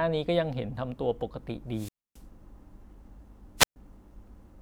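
The radio link from an analogue FM wireless microphone fades twice, and each time the receiver's squelch shuts the output off: a wireless microphone squelch dropout. From 1.71 to 2.24 s the speech gives way to a brief surge of hiss, then a hole of near silence lasting about 0.27 s before the voice comes back. From 3.57 to 3.76 s the same pattern recurs, with a shorter mute of about 0.13 s.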